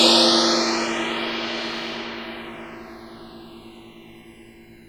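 From start to finish a thin, fixed-pitch whine sits about 40 dB below the sound, pitched at 1 kHz with its strongest component at 2 kHz. This is USB whine: current drawn in the bus's 1 ms frames leaks into the audio through the shared power or ground.

Throughout the clip the two channels also drift apart, heard as a slow flanging sweep when the sound is summed to mono. The channels appear to come from devices on separate clocks that differ by roughly 150 parts per million. The delay between them therefore grows to just under half a millisecond by the end, and the comb notches glide through the spectrum as it grows.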